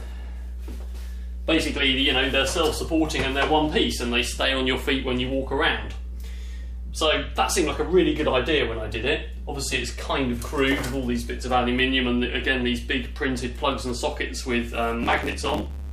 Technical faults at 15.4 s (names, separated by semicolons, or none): mains hum; block size mismatch (truncated)